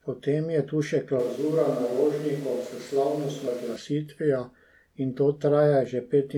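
At 1.19 s the speech suddenly turns roomy and hollow. The bass thins out and the room's reflections come forward. The level stays roughly the same, but background noise rises to around 25 dB below the speech. This sound persists until 3.76 s, then snaps back just as abruptly. A switch to a distant microphone is the likely cause. The close microphone's signal dropped out, and a pickup further from the talker filled in.

At 3.46 s, still inside that roomy stretch, a brief glitch cuts through. This is damaged data in a compressed stream. Part of the encoded audio was corrupted. The decoder misread that frame, lost its sync and hunted for the next valid header. The result is a short blip in the sound.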